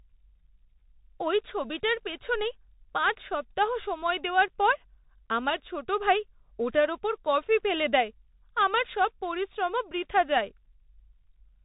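The speech runs through a Bluetooth CVSD headset codec for its whole length: a one-bit delta coder with an adaptive step, which fits a 64 kbps link. Nothing above 3.8 kHz survives, sharp high sounds overshoot the step into scratchy distortion, and a grainy hiss sits underneath.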